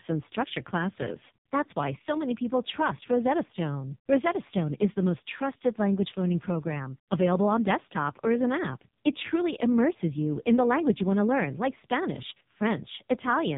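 From start to finish the speech sounds thin, buzzy and synthetic, with a robotic edge and nothing audible above about 3.8 kHz. This is heavy AMR narrowband mobile codec damage. The codec rebuilds the voice from a simple vocal-tract model fed by a handful of pulses, and the coarseness here fits its lowest 4.75 kbps mode, which leaves too few bits for natural texture. Narrowband sampling also removes all the upper brightness.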